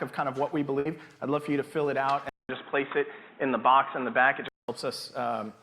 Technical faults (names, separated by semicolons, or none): burst of packet loss; input switched to a poorer device